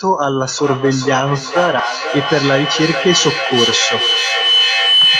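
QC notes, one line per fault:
0.58 s to the end, feedback howl: a loop between devices keeps gaining, narrowing to a whistle around 3 kHz that pulses roughly every 400 ms and tops the speech by about 1 dB.
1.79 s, skip ahead: roughly 400 ms of speech just vanishes and playback jumps forward with no gap filled, so the two sides butt straight together.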